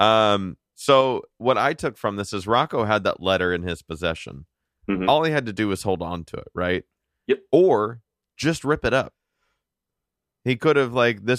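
No technical faults can be heard anywhere in the speech recording; the signal stays continuous and steady throughout.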